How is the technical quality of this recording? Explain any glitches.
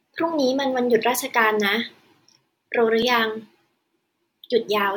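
The recording has one audible glitch, a repeated buffer at about 3.02 s. Playback briefly ran short of fresh audio, so the device sent out the same tiny block a second time, about 1.45 ms long, which fits a 64-sample buffer. Because the repeat is so short, it comes across as a single click rather than a stutter, and essentially no audio goes missing. On a waveform, two identical short segments sit side by side with a hard step at the join. A spectrogram shows a thin vertical broadband line at that point.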